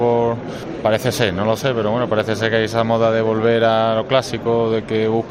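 No technical faults are audible anywhere in the clip.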